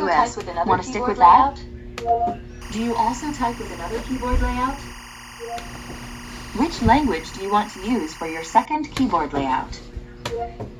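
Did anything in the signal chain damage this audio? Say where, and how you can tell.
Yes: timecode bleed from about 2.62 s to 8.65 s, entering in the analogue wiring. A chirping warble sits some 20 dB under the sound, flipping between pitches near 1 and 2 kHz at a 24-frames-per-second cadence, as linear timecode leaks from an adjacent track or cable.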